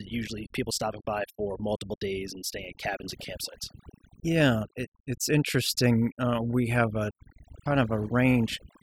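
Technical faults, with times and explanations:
Throughout: overdone noise removal. Aggressive noise reduction strips frequency bands near the noise estimate, leaving near-silent gaps with twinkling specks.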